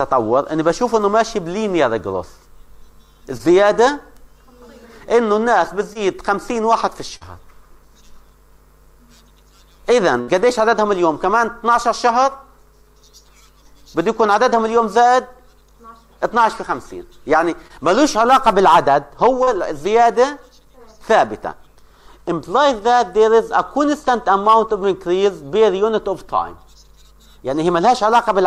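At 3.37, 5.93 and 7.17 s the sound briefly smears or wobbles. This is short concealed packet loss: 20 to 40 ms never arrived, and the decoder extended the preceding sound to fill the hole. At 10.21 s the sound is held and fades for about 66 ms before jumping ahead. That is a burst of packet loss, where consecutive packets were lost or arrived too late and the concealment decayed across the gap. The same brief smears return at 17.67 and 19.43 s, again short concealed losses of about 20 and 40 ms.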